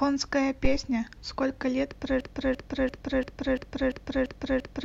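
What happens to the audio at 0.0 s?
Nothing goes wrong at 0.0 s; the speech is intact at that moment, with no audible fault.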